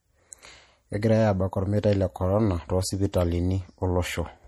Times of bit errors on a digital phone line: none

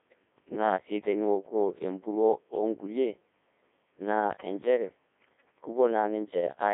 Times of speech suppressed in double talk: none

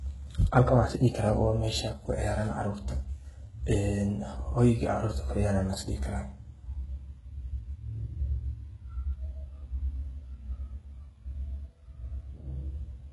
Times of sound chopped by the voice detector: none

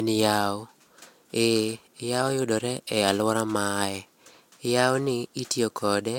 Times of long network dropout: none

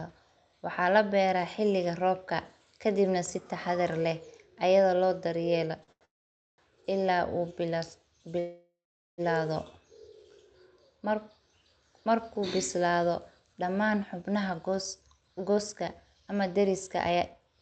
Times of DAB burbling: none

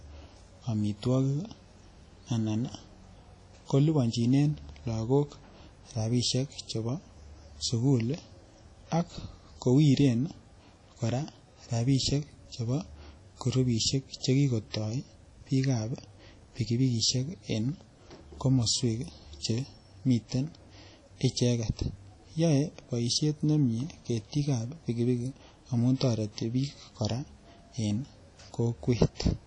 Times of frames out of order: none

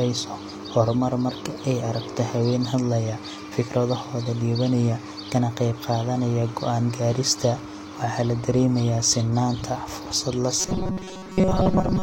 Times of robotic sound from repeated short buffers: 10.59-12.03

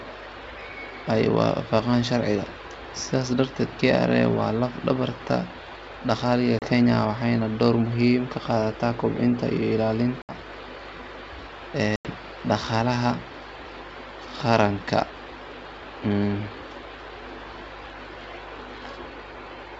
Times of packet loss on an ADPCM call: 6.59-6.67, 10.22-10.33, 11.96-12.07

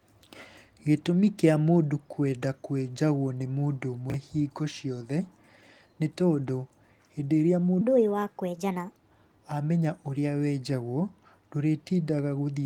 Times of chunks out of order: 4.10-4.14, 6.68-6.72

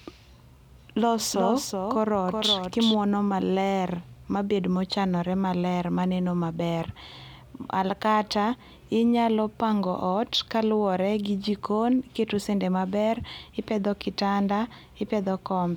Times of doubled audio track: 1.32-2.94

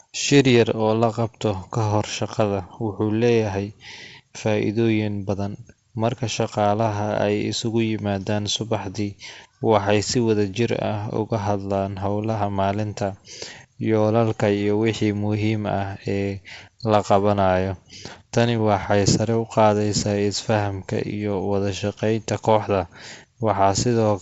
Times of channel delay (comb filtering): none

